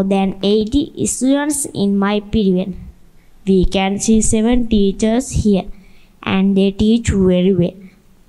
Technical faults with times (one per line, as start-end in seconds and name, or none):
2.90-5.18 drift correction step
7.14-7.65 drift correction step